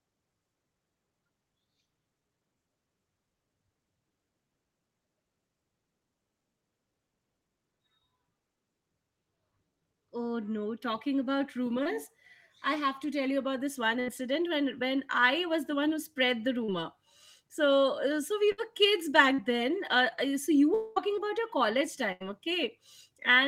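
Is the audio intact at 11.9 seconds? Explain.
No. Between 11.83 and 11.95 s the speech shows short concealed packet loss. About 20 ms of audio failed to reach the decoder in time, and the receiver papered over the gap with roughly 18 ms of synthesised signal, extending the preceding sound's pitch or shaped noise before cross-fading back into the real stream, adding around a hundredth of a second. The result is a brief smear or wobble, and a short consonant may drop out.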